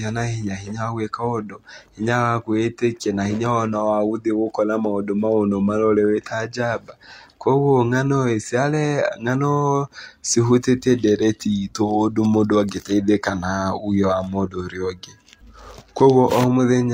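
Nothing stood out as a technical problem on listening to this speech recording.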